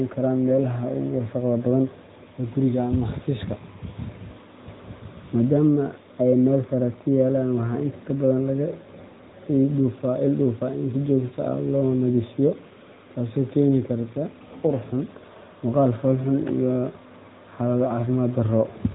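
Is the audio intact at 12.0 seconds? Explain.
No, not really. At 12.0 seconds you're hearing the AMR narrowband mobile codec, and it runs through the whole clip. The speech is squeezed into a phone-style band with nothing above 3.8 kHz, and each 20 ms frame is rebuilt from a vocal-tract model driven by a few pulses. That leaves a plainly audible buzzy, synthetic edge, which fits a mid-rate mode around 10.2 kbps.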